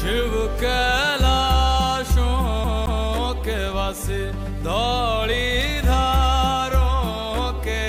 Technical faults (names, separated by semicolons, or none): CD stuck on one turn